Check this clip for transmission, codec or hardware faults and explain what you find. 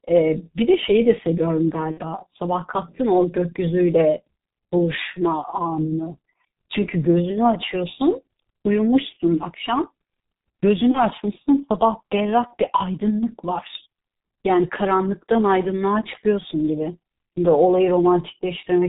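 Two faults are present: heavy G.723.1 codec damage across the whole speech clip, and three bursts of VoIP packet loss concealed by the speech codec.

The G.723.1 codec colours everything. The speech is muffled and hoarse, with smeared consonants, and the degradation is heavy, which fits the 6.3 kbit/s mode. The codec models the voice in coarse 30 ms frames and discards all content above 4 kHz. On a spectrogram, energy stops at a flat ceiling near 4 kHz, and formants look blocky and slow to change.

The VoIP packet loss concealed by the speech codec occurs at 1.91–2.02 s, 10.92–11.03 s and 12.47–12.54 s. When packets went missing, the decoder kept reusing its last pitch and filter settings and lowered the gain frame by frame. The result is a brief stretched sound, a buzzy tone or coloured noise, that fades. The first gap suggests two lost 30 ms frames, and the later ones one each. On the waveform, the envelope sags across each gap before the sound recovers.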